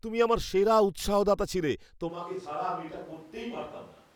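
Speech that at 2.11 s abruptly turns roomy, hollow and thin in the bass, about 10 dB quieter with more room noise, to the end: likely a switch to a distant microphone.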